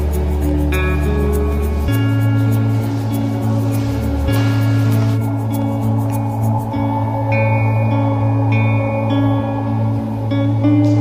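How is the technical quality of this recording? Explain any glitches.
No glitches can be heard anywhere in the recording. Nothing in it calls for a technical explanation.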